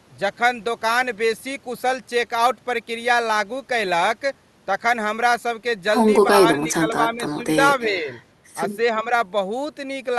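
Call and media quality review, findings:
Speech suppressed in double talk: talker dips at 6.26–6.91 s (deepest about 10 dB), 7.07–7.44 s and 7.83–8.10 s (about 5 dB). Likely echo-canceller ducking. Partial level drops, not clean dropouts like packet loss; top end stops near 12 kHz, fitting Opus.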